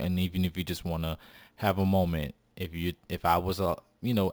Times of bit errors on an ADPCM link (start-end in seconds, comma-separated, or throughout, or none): none